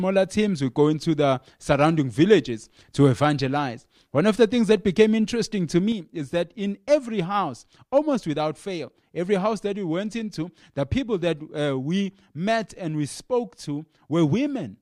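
Speech clip with one channel dropping out from 5.92 s to the end: the level falls abruptly by about 6 dB, most likely a lost stereo channel after mono summing.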